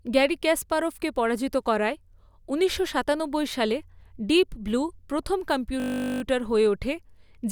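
From 5.8 to 6.22 s the speech locks into a system hang loop: a 20 ms slice repeating at 50 Hz, giving a steady buzz until playback recovers.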